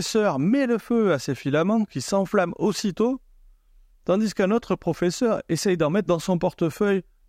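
Nothing goes wrong anywhere in the speech here, so there's no technical fault to point to.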